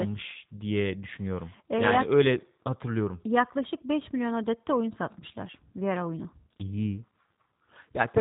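From start to finish the speech carries G.729 codec damage, plainly audible, at a rate that fits 8 kbit/s. The codec models each frame with a vocal tract filter, pitch predictor and sparse pulses, so the speech sounds rough and synthetic, with nothing above 3.8 kHz.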